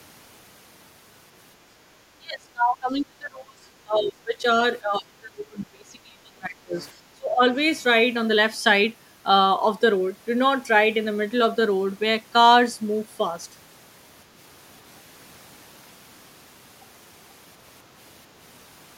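From 2.17 to 3.67 s, 3.84 to 4.44 s, 4.8 to 6.77 s and 7.13 to 7.45 s the speech sinks by roughly 20 to 30 dB, in pieces. This is speech suppressed in double talk, likely an echo canceller mistaking the talker for loudspeaker echo while the far side also spoke. Unlike packet loss, the speech is turned down by the canceller rather than lost in transmission.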